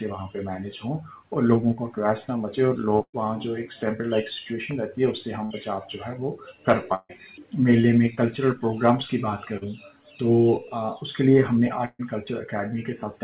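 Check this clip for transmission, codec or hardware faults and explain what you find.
Four bursts of packet loss and two short concealed packet losses occur, over audio band-limited to 4 kHz, which fits a narrowband telephone codec.

Burst of packet loss at 3.02–3.15, 5.45–5.52, 6.94–7.11 and 11.85–12.01 s: about 60–140 ms of audio was lost and replaced with a fading, held continuation. On a spectrogram these show as a smeared stripe that thins, in all but the 5.45 s burst into a brief silent gap.

Short concealed packet loss at 8.15–8.19 and 9.57–9.63 s: 20–40 ms gaps filled by extrapolation, heard as a tiny smear or wobble. On a waveform they show as a brief, slightly repetitive patch.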